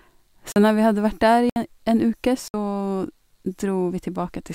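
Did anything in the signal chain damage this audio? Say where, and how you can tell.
Yes. There are three blocks of digital silence in the speech, at 0.52 to 0.56 s (40 ms), 1.50 to 1.56 s (about 65 ms) and 2.48 to 2.54 s (60 ms). Each gap drops to silence and returns with no fade, so the hole is audible as a short dropout. Their spacing of roughly one second points to the driver or buffer stage, where output blocks were not filled in time and zeros went out instead.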